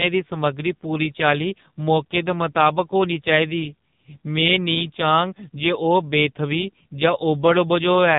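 From start to finish the speech passes through the AMR narrowband mobile codec. Nothing above about 3.8 kHz survives. Heavy coding damage makes the voice buzzy and synthetic, which fits the 5.9 kbps AMR-NB mode. A simple low-pass filter would only dull the top end. Here the vocal-tract model and the sparse pulse excitation rebuild the voice frame by frame, so the harshness and the artificial texture come from the codec's model and not just from lost bandwidth.

At 4.41 s a DC step occurs: the waveform's zero line jumps suddenly to a new offset. It is heard as a single low thump. The offset then sinks back toward zero over a few tens of milliseconds, the way a 5 Hz high-pass bleeds off a DC shift. Unlike a dropout or a click from damaged samples, the speech carries on intact through the thump. Only the baseline moves, so nothing is lost or smeared.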